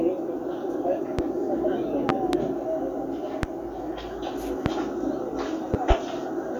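Loud pops occur at 1.19–1.22 s, 2.09–2.37 s (a double), 3.43–3.47 s, 4.66–4.69 s and 5.74–5.94 s (a double). Each is a sharp thump about 20 to 25 dB above the sound, which continues underneath, likely from a voltage spike.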